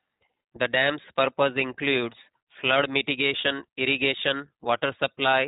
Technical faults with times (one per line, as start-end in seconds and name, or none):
0.00-5.47 iLBC codec